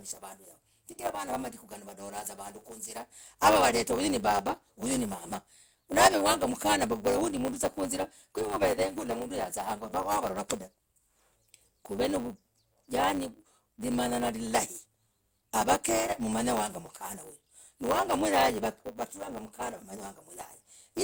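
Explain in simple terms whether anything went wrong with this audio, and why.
A steady buzz runs under the speech from start to finish, and the talking sounds slightly hurried. This is a block size mismatch (truncated). One stage hands over chunks of audio that are longer than the next stage accepts, so the tail of every chunk is thrown away. Those regular cuts make a buzz at 100 Hz, with 512-sample blocks written, and losing the tails makes the speech run about 1.07 times too fast.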